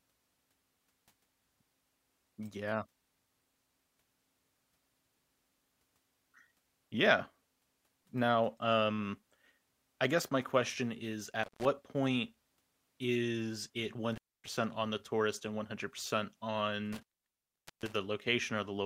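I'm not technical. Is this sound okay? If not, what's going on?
No. An intermittent contact, basically a loose connection, cuts the speech out with a crackle at 11.43, 14.12 and 16.93 s. The last gap lasts nearly a second.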